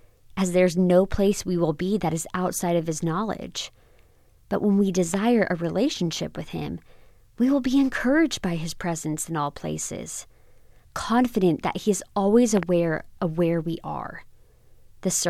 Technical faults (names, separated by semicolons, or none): loud pop